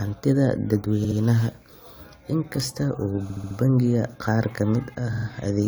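Speech with repeated frames: stutters at 1.03, 3.29 and 5.12 s, where 70, 70 and 46 ms blocks replay two, four and three extra times, appearing as identical repeated waveform and spectrogram slices.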